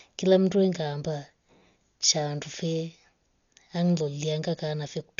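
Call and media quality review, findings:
Speech dull throughout, nothing above 6.9 kHz, rough fluttering noise around tones. Likely Dolby Digital compression. Band narrowed, starved lines filled with noise. Fits about 48 kbps.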